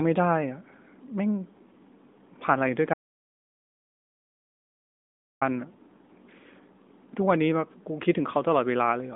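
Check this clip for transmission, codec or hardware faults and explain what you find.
One fault stands out: an audio dropout to silence. From 2.94 s to 5.41 s the speech stops dead, and about 2.5 s is missing. The gap is silent, with no room tone underneath. The speech breaks off mid-flow and resumes just as abruptly. The likely cause is that the input was lost through a disconnected device, a failed link or a mute while the recorder kept writing silence. Anything said in that stretch is gone. Around it, the narrowband mobile sound of AMR is audible: a 200 Hz to 3.6 kHz line with nothing above 3.8 kHz, which fits AMR-NB at 12.2 kbps.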